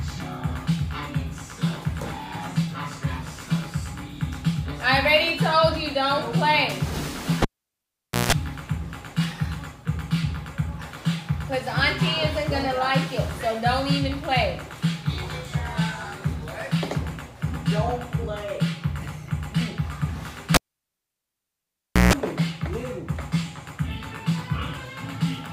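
A live cable is pulled and plugged in twice, at 7.42 to 8.33 s and 20.54 to 22.13 s. A pop is followed by near silence for 853 ms, then 1539 ms, then roughly 150 to 170 ms of 60 Hz mains buzz as the plug tip touches, and another pop on reconnection.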